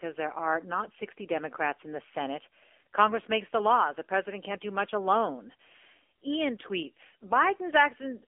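The speech runs through an AMR narrowband mobile codec from start to finish. The band is cut to a telephone line, roughly 300 Hz to 3.5 kHz. Nothing passes above 3.6 kHz, so sibilants and airy detail are gone. The codec rebuilds the voice from a vocal-tract model excited by a few pulses per frame. Here that damage is plainly audible as a buzzy, synthetic tone. That fits a low AMR-NB mode near 7.4 kbps.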